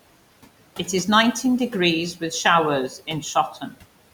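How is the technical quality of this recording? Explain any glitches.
The recording has three technical problems: constant noise suppressor processing, a burst of distortion, and a stretch where speech is turned down.

Noise suppressor artifacts run through the whole clip. The suppressor lowers the bands it judges to be steady noise, frame by frame, by about 18 dB here. The room noise, about 18 dB below the speech, dips between phrases and rises beneath them.

From 1.04 to 1.79 s there is distortion. The likely cause is a stuck bit. One bit of each sample holds a fixed value, so about half the samples are wrong by that bit's weight. The error follows the waveform.

Between 2.89 and 3.78 s, the noise suppressor cuts speech along with the background. Roughly 300 ms in total is affected, with the deepest drop at about 16 dB. The speech turned down there sounds swallowed or faint.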